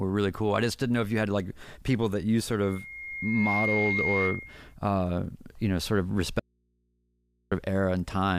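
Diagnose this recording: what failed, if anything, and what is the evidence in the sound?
Loudspeaker feedback squeal appears at 2.63 s, right after "people that you sort". A single tone at 2.1 kHz swells over about a second and reaches roughly the level of the speech. It holds until 4.75 s, and speech resumes with "uh you know sort". The failure is in the acoustic path between microphone and loudspeaker. The mic hears its own output. At 2.1 kHz the loop gain passed one, so that frequency fed itself and grew.

An audio dropout to a faint residue follows at 6.40 s, after "you know sort of". The speech cuts off abruptly, not as a pause or fade. For 1.12 s the gap holds only mains hum, about 45 dB below the speech. Then the signal snaps back at 7.52 s. The hum means everything after the break stayed powered and live. The likely stage is the analogue wiring: a connection briefly opened and left an unterminated input picking up hum.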